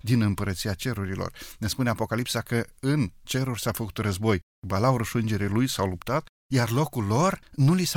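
Nothing stood out as a technical problem on listening to the speech recording.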